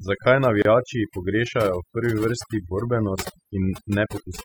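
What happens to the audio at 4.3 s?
At 4.3 s the overdone noise removal, present throughout, is still muting bands near its noise estimate, leaving a background broken into twinkling, warbling specks; a spectrogram shows holes and scattered specks.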